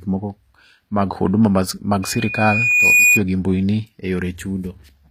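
HE-AAC compression runs throughout, plainly audible and likely the cause of the gritty, lispy s sounds. The treble is rebuilt from copied lower bands rather than coded, which fits a bitrate around 24 kbps, and nothing remains above 14.9 kHz.

A loudspeaker feedback squeal follows from 2.02 to 3.22 s, after "mag huduma mag" and before "gi mbui ni". The microphone re-captures its own loudspeaker, and a 2.5 kHz tone swells over about a second to roughly 10 dB above the speech.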